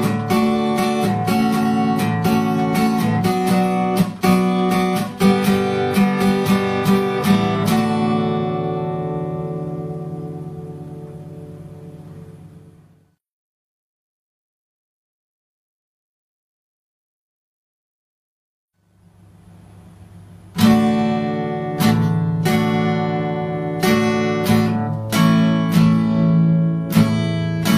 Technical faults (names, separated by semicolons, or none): none